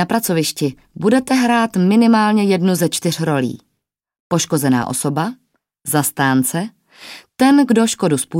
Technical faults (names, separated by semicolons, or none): none